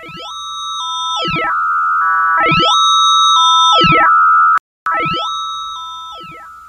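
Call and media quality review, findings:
Playback stall, 4.58–4.86 s: player likely starved of buffered data or its thread blocked; output silent for about 280 ms, sound cut off mid-flow, then resumes.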